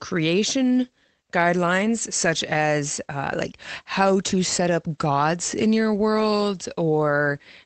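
Nothing goes wrong in this speech recording, which sounds like it came over an ordinary internet call with the top end stopping around 8 kHz, and there's nothing here to flag.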